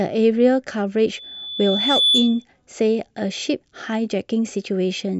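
Loudspeaker feedback squeal runs through this speech clip from 1.14 s to 2.45 s: a single tone at 3.5 kHz swells over about a second and settles roughly 5 dB above the speech before cutting off. The microphone is picking up the loudspeaker it drives, and at 3.5 kHz the gain around that loop exceeds one, so each pass through the chain reinforces that frequency until it dominates.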